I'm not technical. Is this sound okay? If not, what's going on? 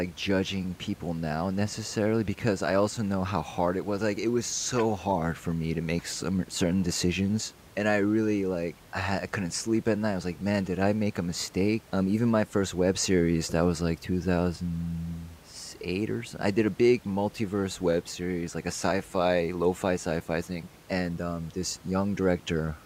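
Yes, this one's fine: nothing is going wrong with the sound, and the faint background noise from the room sits well underneath the speech, which is just how a normal room sounds.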